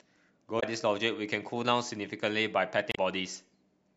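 At 0.56 s, and again at 2.89 s, the speech breaks up briefly, caused by damaged data in a compressed stream. The first lasts about 0.07 s and the second about 0.09 s. In both places the compressed frames have been corrupted, so the decoder misreads them, loses frame sync and hunts for the next valid header. That gap is heard as a chirp, squawk, click or short hole.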